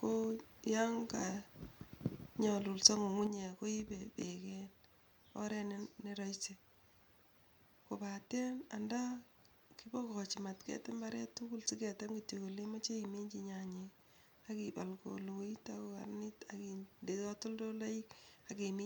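Speech clip where, from about 3.27 s to the end, the level drops abruptly by about 6 dB and stays down, likely one channel dropping out before the mono sum.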